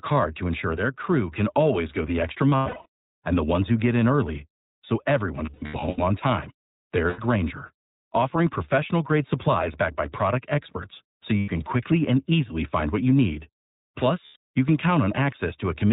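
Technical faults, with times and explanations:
Throughout, iLBC codec: the speech sounds muffled and a little rough and synthetic, with nothing above 4 kHz. The narrowband coder rebuilds each 20 ms frame on its own from a coarse excitation, which fits its 15.2 kbps mode.
2.50–2.87 s, 5.46–5.99 s, 7.10–7.20 s, 11.38–11.50 s, 14.26–14.36 s, lost iLBC frames: the speech briefly turns into a held, buzzy, breathy vowel after "always go the extra", "on time" and "by product experts so". The decoder repeats the last pitch cycle with noise to fill gaps of about 80–340 ms, with runs up to about a tenth of a second. Clear speech returns at once, as at "quickly and easily find".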